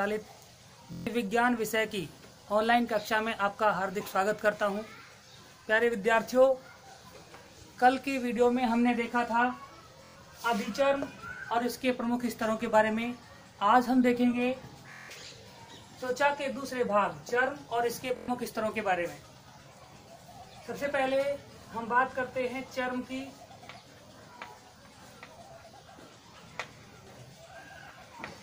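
Bluetooth stutter occurs at 0.93–1.07 s, 10.04–10.16 s, 14.93–15.09 s and 18.16–18.28 s. Late or lost packets made the receiver loop its last short buffer, giving a brief machine-gun buzz. The sound then resumes 116–163 ms further on, skipping ahead.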